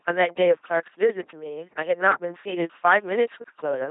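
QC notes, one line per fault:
Throughout: LPC-10 vocoder. The speech has a buzzing, mechanical robot quality, with no content above about 3.8 kHz and heavy codec damage. The voice is rebuilt by a simple vocal tract filter of up to ten poles, driven by either a pulse train or noise. Each instant is treated as entirely voiced or entirely unvoiced, so natural breathiness and texture are lost. The thin, synthetic sound fits the 2.4 kbit/s LPC-10 rate.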